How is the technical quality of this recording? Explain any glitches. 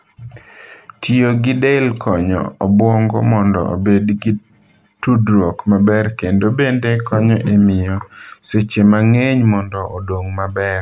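The speech recording has no technical glitches to explain, with the signal holding steady and continuous throughout.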